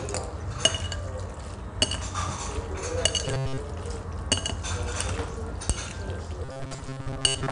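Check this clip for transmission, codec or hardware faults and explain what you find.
Two faults are present: 4-bit ADPCM compression across the whole recording, and two stretches of robotic sound from repeated short buffers.

4-bit ADPCM compression runs throughout these everyday sounds. Each sample is coded as a coarse 4-bit step from a predicted value, and the step size adapts as it goes, so the error is a hiss that rises and falls with the level. It is plainly audible as grit on loud moments and roughness on sharp attacks. Nothing is present above 10.6 kHz, which fits a sample rate near 22 kHz and a stream of about 88 kbps. On a spectrogram, a noise haze fills the gaps between components wherever the sound is strong, and everything stops at a hard ceiling at 10.6 kHz.

Robotic sound from repeated short buffers appears from 3.26 to 3.58 s and again from 6.45 s to the end. The sound turns into a rigid, metallic buzz at 134 Hz. 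The likely cause is audio arriving too seldom, so the last piece of about 7.5 ms is replayed to fill the gap. Roughly 70 percent of these stretches is repetition, and the real material is skipped. On a waveform, identical short cycles repeat. A spectrogram shows evenly spaced harmonic lines at multiples of 134 Hz.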